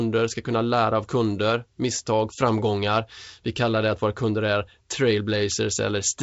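No faults are audible in the speech, and the G.722 wideband coding at 64 kbit/s holds its usual band limit, with nothing above 7.7 kHz.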